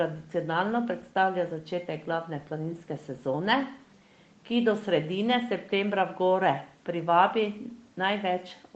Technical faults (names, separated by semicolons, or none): none